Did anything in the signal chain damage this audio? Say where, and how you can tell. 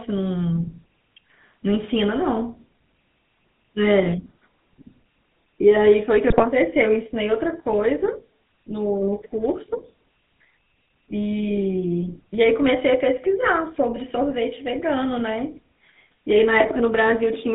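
Yes. The codec stage left the GSM full-rate codec's mark on the whole clip: buzzy, gravelly speech confined to about 150 Hz to 3.7 kHz, which fits a 13 kbps full-rate stream. A spectrogram shows a hard ceiling near 3.7 kHz with coarse, pulse-driven harmonics beneath it.

The network stage caused GSM bit errors from 6.3 to 6.44 s, where the voice breaks into a squawking, gargled burst. Corrupted filter, pitch or gain values, consistent with about five damaged frames, distort the spectrum. On the waveform this appears as sudden level spikes, and on the spectrogram as smeared, misplaced energy.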